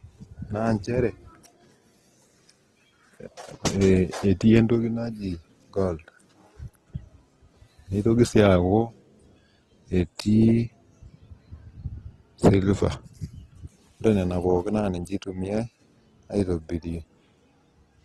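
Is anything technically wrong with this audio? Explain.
Yes, the speech carries plainly audible Opus compression damage for the whole clip. It is likely an encode in Opus's CELT music mode at a very low rate, consistent with roughly 16 kbps. With too few bits, the encoder keeps each band's energy but fills the detail by folding lower bands or with noise. The speech therefore sounds rough, grainy and noisy rather than swirly. The band is also capped, with nothing above 12.1 kHz.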